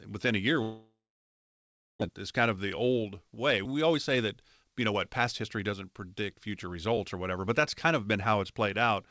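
Right after "within a year", from 0.62 to 2.03 s, the speech trails off into a fading buzz, then about a second of silence, and resumes with roughly a second of material gone. This is likely a long network dropout, with the receiver stretching the last sound to cover missing packets.

From 2.57 to 3.04 s, and again from 4.64 to 7.48 s, the speech sounds hurried while its pitch stays steady. It runs 8% fast in the first stretch and 10% fast in the second. This is jitter buffer speed-up. The receiver trims short pitch-period pieces to drain surplus buffered audio, removing around a twentieth of a second and then about three tenths.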